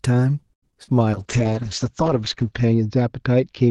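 Speech turns choppy from 0.53 to 1.00 s, with four short holes across that half second, the longest about 90 ms. Repeated packet loss with a robotic sound is the cause: lost audio was patched by stretching the preceding sound, covering roughly 44% of the stretch. From 1.15 s to the end the voice goes rough, watery and muffled, with the top end falling from 12 kHz to 8 kHz. That points to a call bitrate drop, with the Opus encoder pushed down to around 8 kbps and coding more coarsely.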